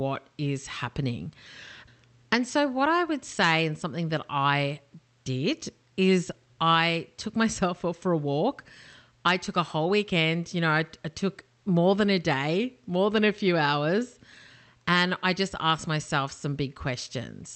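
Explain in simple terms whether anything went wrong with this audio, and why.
Nothing went wrong with this audio: the speech passed through an ordinary internet call connection, and what you hear is simply how such a call normally sounds.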